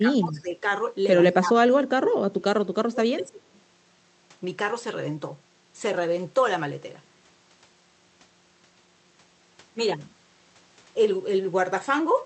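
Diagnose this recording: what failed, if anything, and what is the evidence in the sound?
Speech suppressed in double talk, a call-processing fault, at 0.0–0.64 s, 1.33–1.69 s, 1.94–2.14 s and 2.3–3.47 s: the speech dips by roughly 20 to 30 dB. Likely the echo canceller mistook the talker for loudspeaker echo during overlap and attenuated both.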